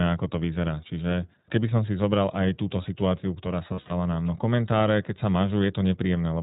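You've got a speech recording that's been through the iLBC codec the whole way, and the coding damage is plainly audible. Everything above 4 kHz is gone, so it has that narrowband phone sound, and the voice comes across a bit rough and synthetic because each short frame's excitation is coded on its own rather than built from the previous one. The character fits the 15.2 kbps mode with 20 ms frames. Then there are lost iLBC frames between about 3.74 and 3.92 s, right after "aj túto situáciu ktorá". The dropouts add up to roughly 120 ms scattered over 160 ms, with the longest run around 70 ms. During the gaps the decoder fills in by repeating the last pitch cycle mixed with noise, so you hear a brief held, buzzy, breathy vowel. Since iLBC frames stand alone, the voice snaps back clean almost immediately once real frames arrive again.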